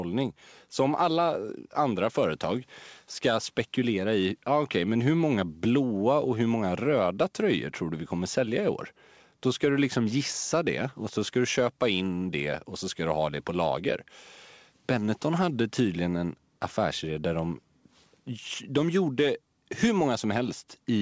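Speech clip with no technical faults; the audio stops at 8 kHz, as expected from the wideband call path it passed through.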